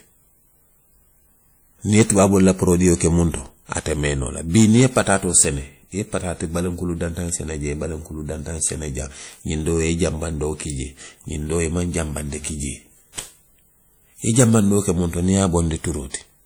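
Throughout the speech, a ringing, washy sound with hiss that breathes with the voice is plainly audible, likely WMA compression near 48 kbps; a spectrogram shows smeared, patchy detail up to 20.1 kHz.

Hard clipping, overdriven about 6 dB at 1.95–3.06 s and 4.55–5.42 s and about 8 dB at 14.30–14.89 s, cuts peaks flat. It is heard as crackle or fuzz, with squared waveform tops and bright harmonic streaks.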